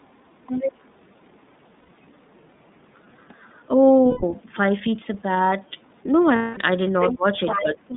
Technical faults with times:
0.00-7.96 DC offset
0.00-7.96 iLBC codec
0.00-0.16 speech suppressed in double talk
0.47-0.72 other side's voice leaking through
1.80-1.89 lost iLBC frames
4.09-4.23 lost iLBC frames
6.36-6.58 lost iLBC frames
6.85-7.14 other side's voice leaking through
6.93-7.34 speech suppressed in double talk
7.47-7.96 other side's voice leaking through
7.60-7.94 speech suppressed in double talk

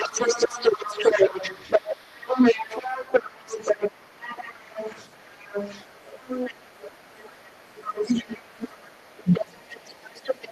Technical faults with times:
0.00-10.52 other side's voice leaking through
9.23-9.61 speech suppressed in double talk

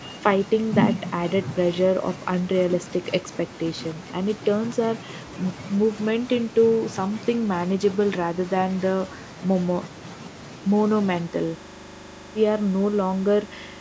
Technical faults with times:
11.32-13.81 system hang loop

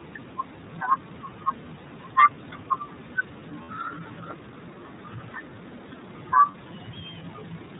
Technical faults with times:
0.00-7.80 iLBC codec
3.63-3.69 lost iLBC frames
6.51-6.55 lost iLBC frames

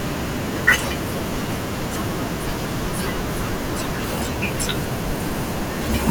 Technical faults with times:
3.48-4.18 processor overload crackle

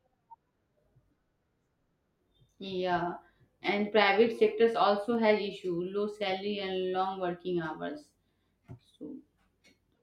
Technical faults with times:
5.15 dropped samples
6.23 dropped samples

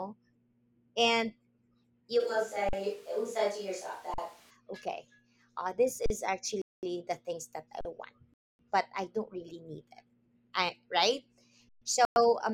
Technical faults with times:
2.21-4.49 switch to a distant microphone
2.69-2.73 underrun with held sample
4.14-4.18 underrun with held sample
6.06-6.10 underrun with held sample
6.62-6.83 Bluetooth stall
7.81-7.85 underrun with held sample
8.34-8.59 Bluetooth stall
11.69-11.82 underrun with held sample
12.05-12.16 Bluetooth stall

